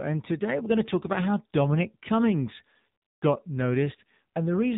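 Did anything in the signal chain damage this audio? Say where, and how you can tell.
Yes. At the codec stage, an AMR narrowband mobile codec throughout cuts everything above 4 kHz and leaves the speech buzzy and synthetic, which fits a rate around 7.4 kbps.

In call processing, AMR comfort noise from 3.02 to 3.22 s replaces 200 ms of real signal with a steady, smooth synthetic hiss after the phone stopped sending speech frames.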